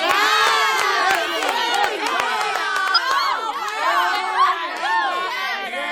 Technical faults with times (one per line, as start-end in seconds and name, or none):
2.94-2.99 compressed frames skipped
4.12-4.15 compressed frames skipped